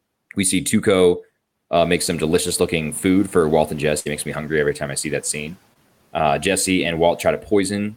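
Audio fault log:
1.75–4.33 s, noise suppressor catching up: the room noise jumps by about 15 dB around 2 s, and the suppressor's noise estimate takes roughly 2.6 s to follow, so the noise comes through with less reduction at first and then gets pulled down by about 5 dB once it adapts.
3.99–4.07 s, burst of packet loss: about 60 ms of audio just never arrives. The receiver stretches the last bit of sound over roughly 61 ms, fading it out as a held buzz or hiss, then jumps ahead with that chunk missing.
5.73–5.77 s, short concealed packet loss: a tiny gap of about 20 ms goes missing, and the receiver papers over it with about 17 ms of continued sound before blending back in. You get a quick smear or wobble, and a short consonant there can disappear.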